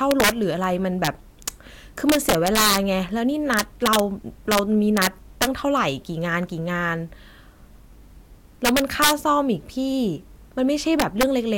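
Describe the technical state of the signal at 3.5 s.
At 3.5 s the speech is affected by integer overflow, present throughout the clip: a gain pushing the signal about 10 dB past full scale wraps the loudest peaks to the opposite sign instead of limiting them. Only a small fraction of samples, around half a percent, flip, each heard as a harsh crack on loud syllables, far sharper than clipping.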